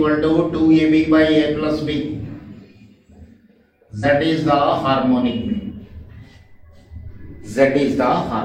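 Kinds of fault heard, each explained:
Compressed frames skipped: Whole blocks of the encoded audio never reach the output, so the sound lurches forward. It happens three times, at 0.75 s, 4.0 s and 5.67 s. The first and last jumps lose roughly two frames, about a tenth of a second each. The middle one loses about one frame. The jump sizes suggest a frame of roughly 46 ms.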